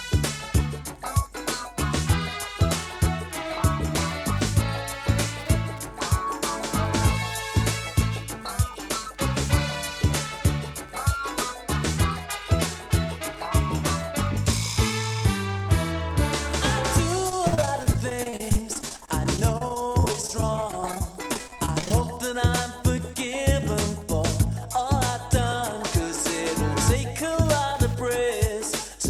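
Wi-Fi interference runs through the whole clip as a faint, steady ticking close to ten times a second, sitting roughly 35 dB below the sound itself. The tick spacing of 102.4 ms matches a Wi-Fi beacon interval. A nearby radio's bursts are being picked up and rectified by the audio circuitry, turning the RF energy into audible clicks. Repeated packet loss (robotic sound) hits from 17.29 s to 22.02 s. Dozens of short holes, the longest about 51 ms, add up to roughly 830 ms of lost audio, about a fifth of that stretch. Each hole is patched by extending the preceding sound, and the next hole follows soon after. The result is choppy audio with pieces missing until the connection recovers.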